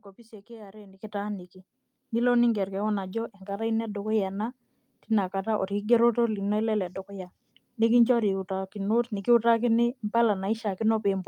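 At 1.02 s the speech and the background noise jump up together by about 10 dB, and at 2.04 s they rise again by about 3 dB. Each is a microphone volume stepped up: the call software judged the input too quiet and raised the device's input level in a single step.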